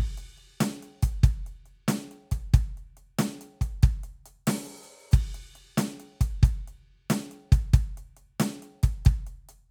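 No faults to report on this music clip; nothing in the audio points to a problem in the chain.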